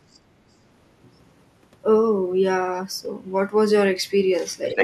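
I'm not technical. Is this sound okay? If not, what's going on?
No. The echo canceller likely failed to fully remove the far end's loudspeaker sound, so there is other side's voice leaking through: a faint scrap at 0.12 to 0.19 s, and a second one at 4.66 to 4.83 s, as loud as the main speech.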